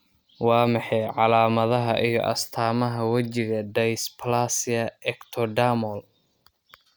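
A speech recording with nothing technically wrong in it, so there are no times or causes to give.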